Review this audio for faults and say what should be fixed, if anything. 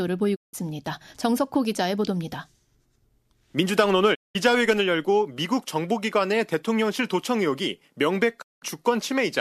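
Digital broadcast dropouts mute the speech at 0.34–0.55 s, 4.13–4.37 s and 8.41–8.64 s. Failed frames made the receiver fade out over 20 ms, losing 168–192 ms each time, which fits seven or eight frames. Waveform and spectrogram show brief fades into completely blank gaps. Better reception or stronger error protection would prevent them.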